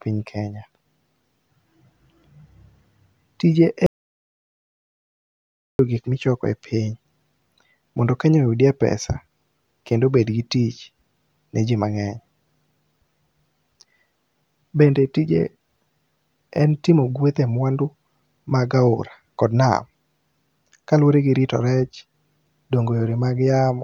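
At 3.86 s the speech cuts to total silence until 5.79 s, an audio dropout to silence. Nearly two seconds vanish, likely from lost input.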